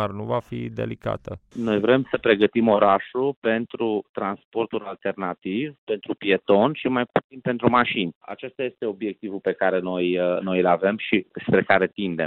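No technical faults can be heard anywhere in this recording.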